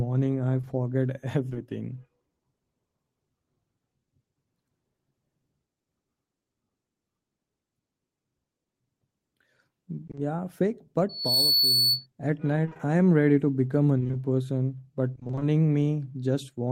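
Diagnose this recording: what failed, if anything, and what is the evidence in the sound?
The network dropped or delayed a few packets between 0.61 and 1.57 s, causing scattered short gaps. About three holes of roughly 20 ms each, around 60 ms in all, were bridged by extending the preceding sound. The speech stays clear apart from brief ticks and smears.

Repeated packet loss, also a network failure, causes robotic sound at 10.07–10.19 s (three 20 ms gaps, half the span concealed) and 12.65–12.81 s, just before "I am ready to" (four gaps, half concealed). At 13.99–15.43 s, after "ready to become a", there are eleven gaps totalling 220 ms. Each 20 ms hole, which fits 20 ms packets, is patched by continuing the last sound, so the speech turns choppy.

A loudspeaker feedback squeal comes from the acoustic loop between a loudspeaker and the microphone feeding it. From 11.09 to 12.06 s, a 4.4 kHz tone, where the loop gain exceeded one, swells over about a third of a second. 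It sits about 5 dB above the speech.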